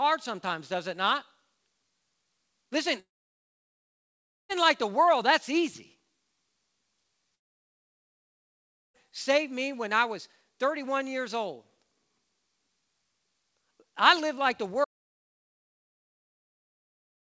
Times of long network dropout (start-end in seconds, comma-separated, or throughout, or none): 3.00-4.51, 7.35-8.96